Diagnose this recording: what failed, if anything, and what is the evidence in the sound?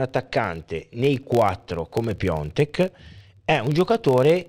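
A filter restarted on every block, in the driver or buffer-level processing, runs throughout the speech. A steady buzz near 43.1 Hz sits under the voice, which fits a 1024-sample block. The filter drops its memory at each block boundary and starts from silence, leaving a small transient every block. Unlike mains hum, this buzz rises and falls with the speech level and fades in the pauses, and its pitch is not 50 or 60 Hz.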